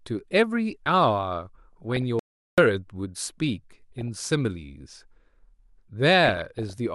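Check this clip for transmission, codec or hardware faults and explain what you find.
The speech carries two kinds of fault: DAB burbling in three places and a single audio dropout to silence.

DAB burbling occurs from 1.73 to 2.02 s, 3.98 to 4.30 s and 6.25 to 6.74 s. Weak reception let bit errors, roughly half a percent, slip past the error correction into the MP2 data. Corrupted samples then put short blips of noise in single sub-bands. Each burst spans what sounds like a dozen to twenty-odd frames, heard as blips of noise over the speech.

The audio dropout to silence runs from 2.19 to 2.58 s, about 0.39 s. The input was likely lost through a disconnection, failed link or accidental mute while recording continued writing silence. The speech cuts off abruptly into total silence with no room tone, then resumes mid-flow, and whatever was said in that gap is gone.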